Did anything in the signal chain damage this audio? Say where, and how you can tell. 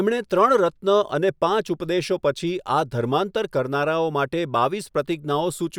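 No, nothing along the way seems to have touched this one, so there's no stage to point to and nothing in what you hear that needs explaining.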